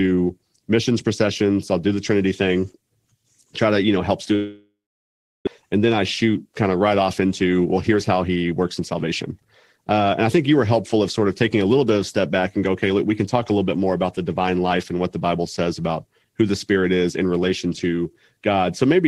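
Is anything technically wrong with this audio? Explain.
Yes, there are two faults.

From 4.35 to 5.48 s, just after "to you know help", the speech breaks off. What is left briefly trails on as a fading buzz, then about 0.71 s of near silence follows, and the talk resumes at "and then I shoot" with roughly 0.8 s of speech gone. This is likely a long network dropout: packets stopped arriving, the receiver concealed the gap for a short time and then gave up. The late audio pushed the delay up by about 0.3 s.

From 7.20 to 10.49 s, between "kind of right off" and "you were helpful of", the speech sounds hurried, running about 9% fast while keeping its normal pitch. This is a jitter buffer speed-up. After delayed packets arrived in a bunch, the buffer held more audio than its target. The receiver cut many short pitch-period-sized slices, roughly 0.3 s in total, to bring the delay back down.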